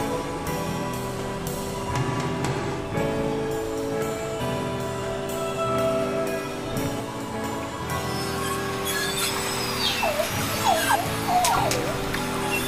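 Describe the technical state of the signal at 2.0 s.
At 2.0 s the signal is intact, with no audible fault at that moment.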